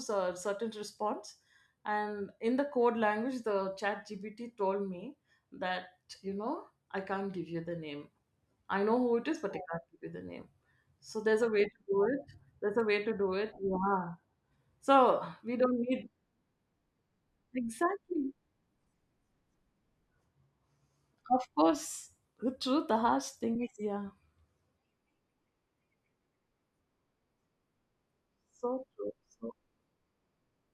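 No technical faults can be heard anywhere in this speech recording. There is nothing to place on a timeline and nothing that points to a problem in how the audio was captured or carried.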